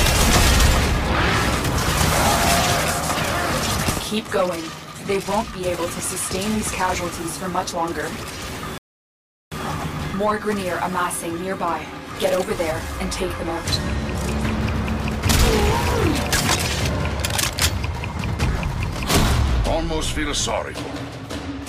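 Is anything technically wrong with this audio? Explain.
Yes. From 8.78 to 9.52 s there is a rebuffering stall. The player ran short of downloaded audio and paused until more arrived, inserting 0.74 s of silence. The sound resumes exactly where it stopped. Unlike a dropout, nothing is missing; only time is added.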